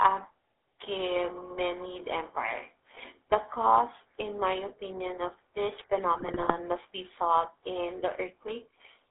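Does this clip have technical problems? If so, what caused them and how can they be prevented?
Yes. GSM full-rate codec damage runs throughout. The sound is buzzy and gravelly, as the codec rebuilds it from a vocal-tract model and coarse pulse excitation at a rate that fits 13 kbps. A spectrogram shows a hard band of roughly 300 Hz to 3.6 kHz. Using a wideband codec such as AMR-WB or EVS would prevent this.

GSM bit errors strike from 6.14 to 6.55 s. Corrupted filter, pitch and gain values cause squawks and gargling, seen as jagged level spikes and smeared spectral frames. Stronger signal coverage and better error protection would prevent them.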